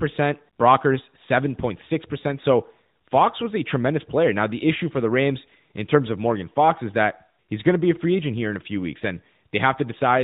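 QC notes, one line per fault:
No faults to note in this speech clip.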